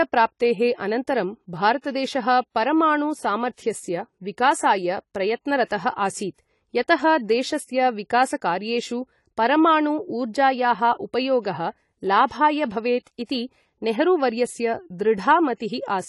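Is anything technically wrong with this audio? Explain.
Yes, there are two problems.

Throughout the speech, nothing is present above 11.4 kHz, and the remaining top end sounds dull, smeared and warbling, with a fizzy edge on sibilants. This is most likely AAC compression at a low bitrate, around 32 kbps. The encoder spends too few bits on its quantised frequency lines, so it cuts the top off and lets the upper bands thin out. A plain low-pass filter would only sound darker. It would not add this swirling texture.

Pre-echo appears at 5.65 to 5.71 s, 12.27 to 12.31 s and 13.25 to 13.29 s, lasting about 52, 38 and 44 ms. Each time, a brief hiss arrives just before a sharp onset, and the attack itself sounds softened. The codec spreads noise meant for the loud onset across its whole block, including the quiet moment before it. Reverb or a delay echo would trail after the sound, but this smear comes before it.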